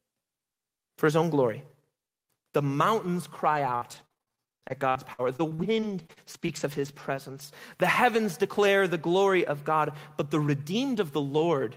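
From 3.47 to 7.41 s the speech turns choppy, with repeated packet loss: dozens of gaps up to 60 ms are patched by stretching the preceding sound.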